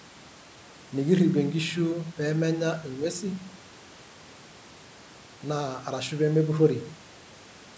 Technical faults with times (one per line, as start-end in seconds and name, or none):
none